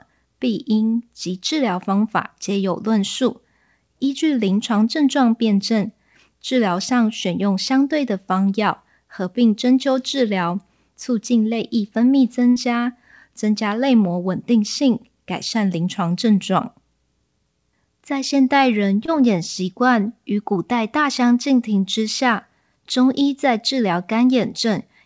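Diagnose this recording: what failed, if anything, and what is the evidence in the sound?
The network dropped a burst of packets from 12.50 to 12.58 s, with about 60 ms of speech missing. The jitter buffer's concealment stretched the last sound over roughly 57 ms and faded it. That's the brief fill you hear before the audio jumps ahead.

There's also a short concealed packet loss at 19.06 to 19.10 s, again on the network side. About 20 ms never arrived, and the decoder extrapolated the previous sound and crossfaded back. That leaves a quick smear in a call path topping out at 8 kHz, which fits G.722 at 64 kbps.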